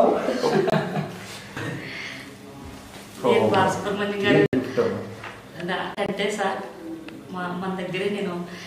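Three dropouts from corrupt frames being muted, at 0.70 to 0.75 s, 4.46 to 4.55 s and 5.95 to 6.10 s. The compressed data got damaged, the decoder rejected those frames, and the player filled the gaps with silence. Each hole cuts in abruptly, lasting about 50 ms, 90 ms and 150 ms. That fits roughly two, three and seven lost frames. Timing carries on unshifted afterwards.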